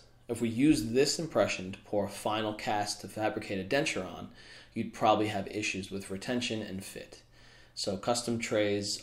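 No technical faults can be heard anywhere in this audio.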